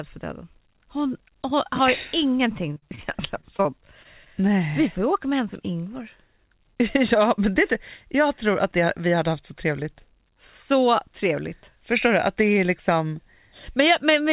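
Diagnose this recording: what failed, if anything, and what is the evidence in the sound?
Network stage: repeated packet loss from 2.74 to 3.67 s. Eight gaps, up to 42 ms each, were patched by extending prior speech, giving choppy robotic sound.

Network stage: short concealed packet loss at 4.03 to 4.07 s. About 20 ms never arrived. The decoder bridged it, leaving a brief smear.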